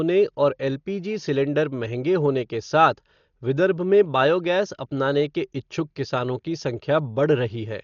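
Dolby Digital compression damage runs through the whole speech clip, with nothing above 7 kHz and heavy coding damage, fitting a rate near 40 kbps. The likely cause is an AC-3 encoder starving frequency lines of mantissa bits, so the decoder fills them with dither noise, giving a dull sound with rough, fluttering grain.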